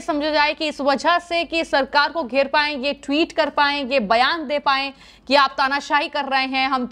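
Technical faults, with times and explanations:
No technical faults can be heard in this clip. There is nothing here to place at a time or explain.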